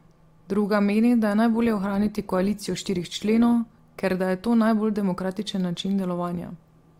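From 1.53 s to 3.53 s, just after "meni da je", an adaptive stream at a lower bitrate takes over without any gap, as if it had dropped from 64 to 24 kbit/s Opus. Codec artefacts rise, and quality returns before "ker da je to".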